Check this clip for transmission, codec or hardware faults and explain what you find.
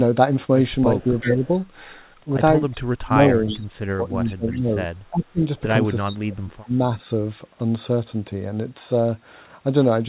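Two faults show up in this speech. Both come from the far end's echo handling. The audio itself is band-limited to about 4 kHz, which fits a narrowband G.711 call path.

Echo leak: at 0.99 to 1.47 s, 3.49 to 3.65 s, 4.26 to 4.59 s and 6.06 to 6.68 s, a faint second copy of the speech trails the original. It lags by 370 ms each time. It sits about 10 to 25 dB under the main voice. The likely cause is a loudspeaker end whose echo canceller let some of its microphone pickup through and sent it back.

Speech suppressed in double talk: at 1.05 to 1.44 s, 2.76 to 5.42 s and 6.09 to 7.04 s, the talker's level sinks while the far side's sound is playing on the loudspeaker. The first dip is shallow, around 10 dB. The later ones go deeper, near 20 and 25 dB. The likely reason is an echo canceller that could not separate the talker from the echo and turned both down.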